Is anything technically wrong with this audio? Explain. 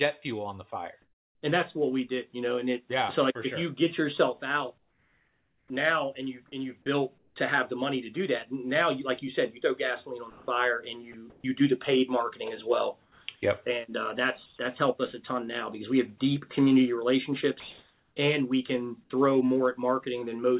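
Yes. Comfort noise in place of the background appears at 1.02–1.42 s, 4.78–5.70 s, 7.18–7.36 s, 13.02–14.58 s and 17.6–18.16 s. The likely cause is discontinuous transmission, where the receiver fills pauses with synthetic noise. The background turns flat and featureless: about 6 dB quieter in the first two gaps, about 4 dB quieter in the third, and about 5 dB louder in the last.

Onsets clipped by the voice detector occur at 5.66–5.70 s and 13.26–13.28 s. The detector likely reacted late, so 40 ms and 20 ms of the start went missing and the sound begins abruptly.

Sound chopped by the voice detector runs from 10.3 to 11.44 s. Sending likely toggled on and off repeatedly, swapping about 340 ms of sound for synthetic fill.

The call path's narrow band, with nothing above 4 kHz, fits a G.711-type telephone codec.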